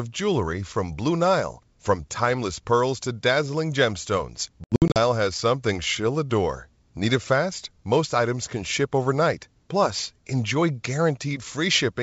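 Packet loss on an ADPCM call, roughly ten packets, cuts 200 ms from this speech clip across 4.64 to 4.98 s: hard silent gaps after "pearls to dazzling gemstones", then slightly distorted speech from a desynchronised decoder before "has something she'll adore".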